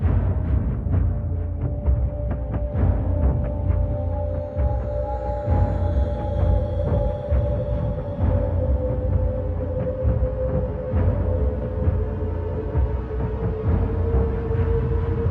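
No technical faults can be heard anywhere in this audio. Nothing in the sound calls for a timestamp or a correction.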